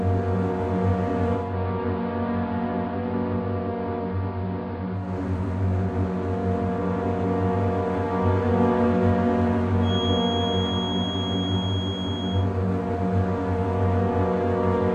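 A recording of everyday sounds, with digital radio blending to analogue from 1.32 to 5.18 s. The receiver loses its digital stream and cross-fades over about 262 ms to the AM broadcast, so the level drops about 4 dB, and hiss rises to roughly 35 dB below the sound. A feedback whistle follows from 9.79 to 12.5 s: a thin 3.3 kHz tone at one pitch, slowly swelling and fading, sits roughly 10 dB below the sound, likely from a loudspeaker-to-microphone loop held just at the edge of feedback, ringing without building up.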